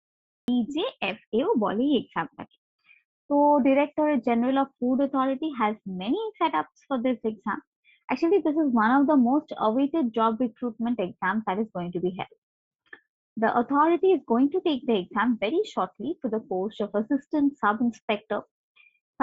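For the first 0.48 s there is dead digital silence, then the sound bursts in abruptly at 0.48 s, already mid-flow with no natural attack or fade-in. This is a cut-off start: capture began late, and the band tops out near 8 kHz.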